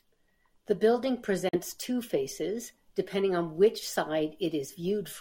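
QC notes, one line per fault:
1.49–1.56 s, Bluetooth dropout: the speech cuts to silence for about 75 ms, then resumes at "two faces depending on" as if it had kept playing, likely from packets reaching the headphones too late. The waveform flatlines, and the spectrogram shows a blank vertical band.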